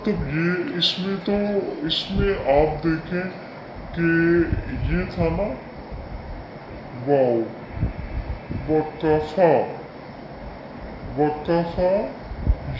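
From start to finish the audio has a wrong sample rate: it plays at two-thirds speed and about 7 semitones low, which fits 24 kHz material played back at 16 kHz. Unlike time-stretching or pitch-shifting, tempo and pitch drop together by the same ratio.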